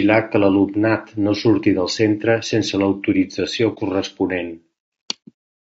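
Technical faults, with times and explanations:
Throughout, low-delay AAC compression: the speech has likely been through a low-delay AAC coder of the AAC-ELD kind, and the damage is plainly audible. Its short analysis frames separate the pitch harmonics poorly, so the voice sounds rough and grainy. Noise fills the gaps between harmonics, and the top band is thinned or synthetic. The amount of degradation points to a lowish bitrate, around 32 kbps, where too few bits remain to hold the harmonic detail cleanly.
3.74 to 3.79 s, AAC frame loss with muting: the decoder lost compressed data, which points to a single dropped frame, and it replaced the missing spectrum with silence. About 30 ms of audio is gone. The overlapping transform windows spread that loss at both edges, so the sound fades down into a brief dip and fades back up rather than cutting off abruptly. The speech seems to dip or vanish for a moment.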